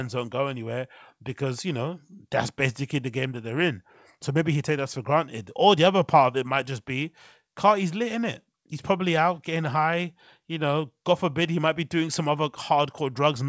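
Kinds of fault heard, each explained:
No faults can be heard in the speech. The sound stops at about 8 kHz, which is what the call path's wideband codec, likely G.722, does as part of its normal work.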